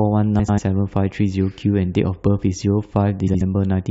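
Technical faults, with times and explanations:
0.39 to 0.59 s, frames out of order: two adjacent chunks of about 93 ms each got decoded in swapped order, so this stretch of speech plays back-to-front by halves. You hear a garbled flutter. Nothing goes missing; it's just shuffled.
3.27 to 3.42 s, frames out of order: the same swap again, this time with shorter halves of about 70 ms, giving a briefer jumbled flutter.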